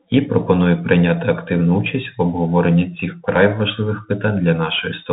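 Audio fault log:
Throughout, Bluetooth CVSD headset codec: the speech has been squeezed through the narrowband headset link, so nothing survives above about 3.8 kHz and it all sounds boxed-in and phone-like. The codec damage is plainly audible. CVSD sends just one up-or-down bit per sample with an adapting step, which fits a 64 kbps stream, and that crude tracking leaves a grainy, scratchy edge on the speech that's hard to miss.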